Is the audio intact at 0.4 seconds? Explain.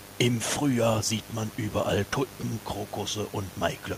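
No. Mains buzz runs through the whole clip, including 0.4 s. Switching spikes from the 50 Hz supply leak in twice per cycle, producing harmonics up to several kHz. The result is a steady, raspy buzz roughly 20 dB below the speech.

Low bit depth with dither is also present at 0.4 s and throughout. The hiss points to a signal coarsely rounded to about 7 bits, with dither turning the rounding error into constant, even white noise roughly 25 dB below the speech, without audible distortion, sitting at about the level of the room noise.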